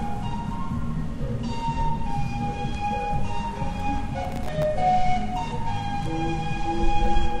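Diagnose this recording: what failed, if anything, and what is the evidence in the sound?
A gritty burst of crackle tears through the sound from 4.24 to 4.63 s, then stops cleanly. This is processor overload crackle at the driver and buffer stage: around twenty very short buffers missed their deadlines, each leaving a hard-edged sliver of silence.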